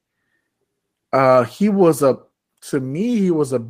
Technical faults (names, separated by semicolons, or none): none